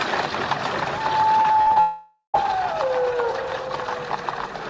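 Repeated packet loss (robotic sound) runs from 1.42 to 1.78 s. The audio breaks up into short choppy pieces. Five separate holes open in quick succession, the longest about 40 ms. Each is patched by stretching out the sound just before it, so roughly a third of that stretch is filler rather than real signal, about 0.12 s in total. A long network dropout follows almost immediately, from 1.80 to 2.36 s. Here the sound smears into a continued buzz that fades away, leaving about 0.12 s of silence before the audio resumes with that half-second missing. This is likely a stretch where no packets arrived at all and the receiver could only extend the last sound it had. Throughout, the call codec sound fits G.722 at 64 kbps, with nothing above 8 kHz.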